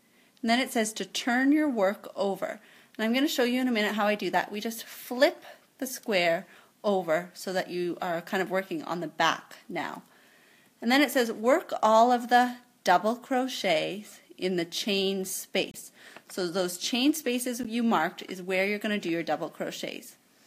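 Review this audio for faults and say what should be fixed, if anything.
There are two spots where a corrupt frame got decoded and played anyway, at 15.71 to 15.76 s and again at 17.63 to 17.66 s. Flipped bits in the compressed data threw off the gains or codes, so energy landed at the wrong frequencies for the span of the damaged frames: roughly two frames the first time, one the second. The second glitch is the louder one, by around 10 dB. To prevent this, add error checking on the frames and conceal or drop any that fail instead of decoding them.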